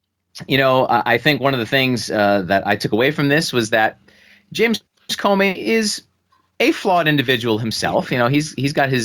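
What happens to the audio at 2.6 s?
Hard clipping occurs from 2.52 to 2.72 s, just before "took away from this". The speech peaks run about 1 dB past what a stage can pass, so their tops are cut flat. That adds high harmonics, heard as brief crackle on the loudest moments.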